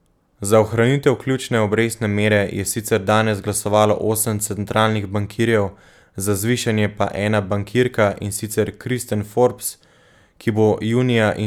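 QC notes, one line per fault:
No faults were heard in this speech clip. Nothing in the audio calls for a QC note.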